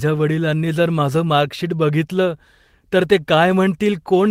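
No technical faults can be heard anywhere in the recording; the speech signal holds steady throughout, with no dropouts, level disturbances or added noise.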